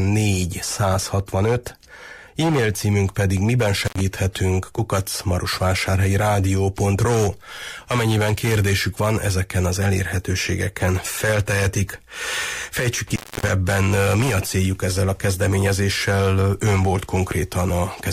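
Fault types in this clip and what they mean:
Intermittent contact: the sound drops out abruptly with crackle at each edge and faint hiss in the gap, once for 79 ms at 3.83 s and again for 277 ms from 13.07 s, as a loose cable or plug briefly opens the line.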